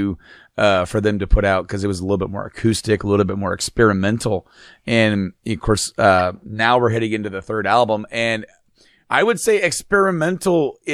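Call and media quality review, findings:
Corrupt frame decoded at 6.19–6.21 s, between "of course" and "now we're heading": short chirp-like burst peaking around -10 dBFS. Decoder played bit-damaged data, consistent with about two frames hit.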